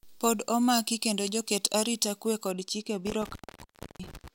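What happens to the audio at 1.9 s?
At 1.9 s the speech is still inside a stretch of pre-emphasis left on, running from 0.0 to 2.52 s. The FM 75 µs treble lift was never undone, leaving 10 kHz about 13 dB above 1 kHz. Unlike a lost low end, the bass holds, but sibilance sounds thin and harsh.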